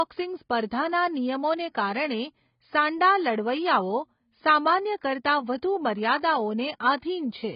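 All the way through, the speech sounds dull and smeared, with nothing above about 5.1 kHz and a warbly, fizzy edge on sibilants, likely heavy AAC compression at roughly 16 kbps.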